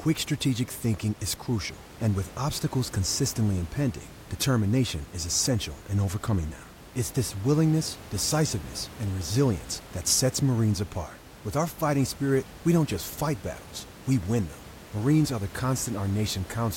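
There are no technical faults to describe; the only background sound is the room's own noise, sitting about 19 dB below the speech.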